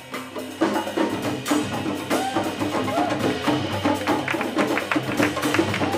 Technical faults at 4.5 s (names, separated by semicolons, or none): dropped samples